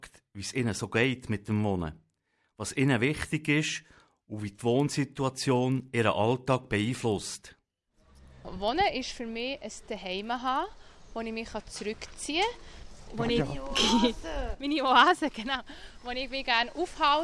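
Right through the clip there's a steady tick pattern at 25 Hz, and it's the classic resampler restarted on every block problem. The rate drop from 48 kHz to 24 kHz was done in 40 ms chunks, each treated as if nothing existed before or after it, so the filter got the wrong neighbours at every seam. That leaves a small glitch each block, heard as a faint rhythmic buzz that rides along only while there's signal.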